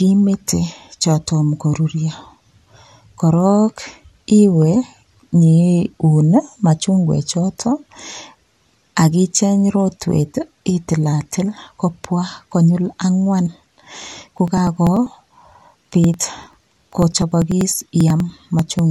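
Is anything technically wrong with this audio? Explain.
Yes. From 14.28 s to 18.79 s the speech carries periodic USB or driver dropouts. Something is stalling the USB bus or audio driver every 0.098 s, about ten times a second, and each time roughly 2 ms of audio is skipped outright. The result is a steady train of about fifty small ticks, heard only while the voice is sounding. That strict, even spacing is what separates it from random clicks or network packet loss, which arrive irregularly.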